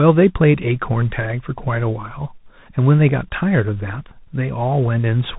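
Throughout, tandem speech coding, likely CVSD then mu-law then CVSD, recodes already degraded speech, sounding rough and noisy. The spectrogram is empty above 3.8 kHz.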